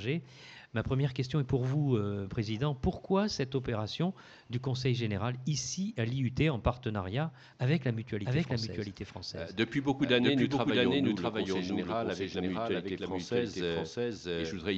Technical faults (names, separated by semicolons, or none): doubled audio track